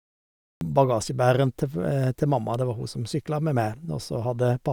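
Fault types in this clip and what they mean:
Cut-off start: capture began late, so the speech opens mid-sound. The first 0.61 s is digital silence, and at 0.61 s the signal jumps straight in at full level with no natural attack or fade, as if the opening was chopped off.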